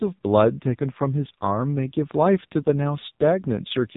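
Throughout, the speech carries the AMR narrowband mobile codec. Nothing above 4 kHz survives. The damage is heavy. The voice sounds buzzy and synthetic, which fits a low AMR-NB mode near 6 kbps, where few pulses remain to drive the vocal tract model.

From 3.00 to 3.04 s there is a lost AMR speech frame. The decoder bridged the gap by repeating the previous pitch and vocal tract settings at lower gain. It is heard as a brief dip or warble, which fits a single lost 20 ms frame.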